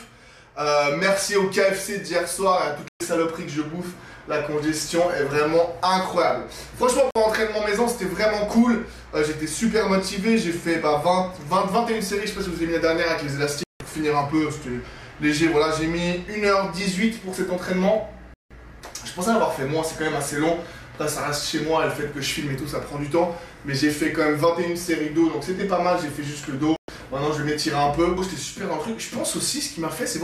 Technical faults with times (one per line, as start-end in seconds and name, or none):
2.88-3.01 digital broadcast dropout
7.11-7.16 digital broadcast dropout
13.63-13.81 digital broadcast dropout
18.34-18.51 digital broadcast dropout
26.76-26.89 digital broadcast dropout